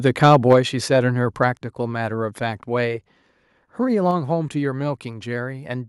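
Speech, where the microphone input was likely set too high: from 0.24 to 0.53 s, microphone overload drives peaks about 3 dB past the converter's limit, flattening a few percent of samples into harsh crackle. The software then likely stepped the microphone volume down twice, abruptly dropping voice and background by about 3 dB at 0.53 s and about 5 dB at 1.53 s.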